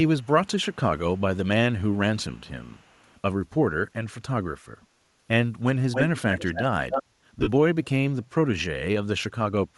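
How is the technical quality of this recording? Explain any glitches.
Quality is compromised by steady codec damage and several echo bursts, with a short dropout near the end.

Bluetooth LC3 compression runs through the whole clip. The top of the spectrum has a breathy, grainy fizz where detail should be, the kind of thing you get when a transform codec zeroes upper bands and fills them with noise. That's likely LC3 in 7.5 ms frames at around 48 kbps, and the damage is plainly audible on the speech.

Echo leak shows up at 0.22–0.27, 0.72–0.76, 1.16–1.37, 1.91–1.97, 2.37–3.15, 5.92–6.63 and 6.9–7.03 s. The first five are faint ghosts, roughly 35 dB down, trailing by 327 ms. The last two are a different story: a 283 ms delayed copy at about 5 dB below the speech, then about level with it. The likely cause is a loudspeaker on the far end whose echo canceller let its own mic pickup slip back into the call.

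Lost LE Audio frames hit between 7.39 and 7.48 s. About 60 ms of audio goes missing, scattered across 75 ms, with the longest gap around 40 ms. That pattern fits eight 7.5 ms frames dropping out. The decoder papers over each gap by reusing the last spectrum with scrambled signs, so you hear a brief noisy smear instead of clean speech.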